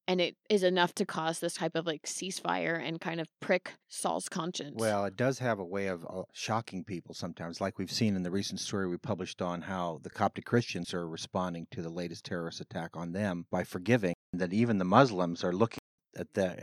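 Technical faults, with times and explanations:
14.14–15.98 s, input switched to a poorer device. Right after "attack on them by", a 200 ms silence falls. The speech then turns duller, with nothing above 9.1 kHz, and a faint new background noise sits far below it. Loudness barely changes. A different microphone is the likely cause.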